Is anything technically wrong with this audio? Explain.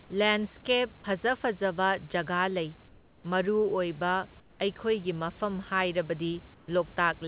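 Yes. Comfort noise in place of the background occurs three times: 2.88 to 3.24 s, 4.4 to 4.6 s, and 6.54 to 6.68 s. In each pause the real room noise disappears. A steady, featureless hiss takes its place, about 4, 7 and 3 dB quieter respectively. The likely cause is discontinuous transmission. The sender stops sending during silence, and the receiver fills the gap with synthetic noise. The call path carries nothing above 4 kHz, which fits G.711 coding.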